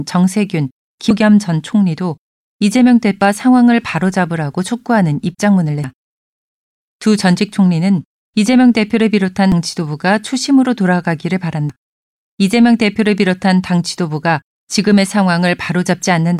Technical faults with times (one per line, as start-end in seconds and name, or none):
1.10 damaged data in a compressed stream
3.21 damaged data in a compressed stream
5.84 damaged data in a compressed stream
9.52 damaged data in a compressed stream
11.69 damaged data in a compressed stream